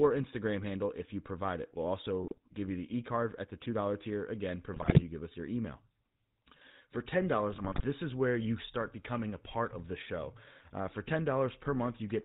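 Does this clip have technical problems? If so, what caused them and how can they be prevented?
Yes. The whole recording carries GSM full-rate codec damage: a buzzy, gravelly roughness with nothing above 4 kHz, which points to the original GSM full-rate coder at 13 kbps. That coder models the vocal tract and excites it with a sparse, regularly spaced pulse train, so the harshness is constant and tied to the voice itself. Generic low-bitrate coders tend to sound smeared or warbly instead. Preventing it means carrying the call over a wideband or higher-quality codec such as AMR-WB rather than legacy full rate.

There are also three bursts of GSM bit errors: 2.23–2.38 s just before "give you the", 4.73–5.01 s between "tier again" and "you give us your", and 7.50–7.87 s just before "is where you start". Flipped bits corrupted the decoder's filter, pitch and gain values, so the speech squawks, pops and gargles. 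That separates it from packet loss, which leaves gaps or smooth concealment rather than distorted bursts. A stronger radio link or better channel coding would prevent it.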